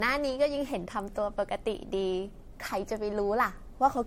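Speech carrying generation loss throughout: swirly smearing and blurred attacks beyond what one MP3 pass would leave, likely about seven re-encodes; nothing above 16.5 kHz.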